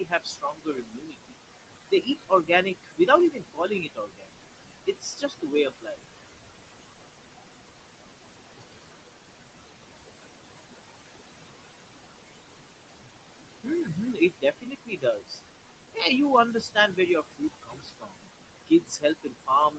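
Noise suppressor artifacts run through the whole recording. The suppressor pulls the room noise down by about 21 dB wherever it judges the signal to be steady noise. The background, which sits only about 9 dB below the speech, sinks in the gaps and swells back under the speech.

The noise suppressor also cuts speech, turning parts of it down by about 16 to 22 dB. It happens from 0.0 to 1.43 s, from 1.91 to 6.03 s, from 13.63 to 15.4 s, briefly from 15.94 to 16.03 s, from 16.53 to 18.22 s, and from 18.67 s to the end. In the longer spans roughly one to two seconds of sound is affected. Quiet endings and soft consonants sound swallowed and faint.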